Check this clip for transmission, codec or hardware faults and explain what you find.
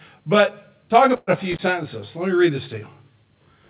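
Three faults are audible in this speech: comb filtering throughout, a burst of packet loss, and a brief intermittent contact.

The whole clip sounds rough and slightly doubled, a colouring that never changes. This is channel delay (comb filtering). One channel trails the other by around 20 ms, and when the two are mixed to mono, content common to both cancels at regularly spaced frequencies. The first notch sits near 30 Hz and the rest repeat at twice that frequency as spacing up the band, so the notches stay fixed.

At 1.16 s, right after "but talk", the sound freezes and fades until 1.30 s, when speech resumes at "a few". This is a burst of packet loss. Roughly 120 ms of audio never arrived in time, and the receiver concealed the gap by stretching the last sound for about 110 ms and attenuating it, leaving about 30 ms of silence. The speech that belonged in that stretch is gone.

From 1.51 to 1.59 s, just after "a few", the signal drops out with crackle at both edges. 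The opening lasts about 45 ms and leaves only faint hiss. This is an intermittent contact, where a loose plug or cable breaks the connection for a moment and then reconnects. The clicks are where the circuit opens and closes.

The call path itself is audible as G.711 mu-law coding with nothing above 4 kHz, which fits a 64 kbps telephone-band link.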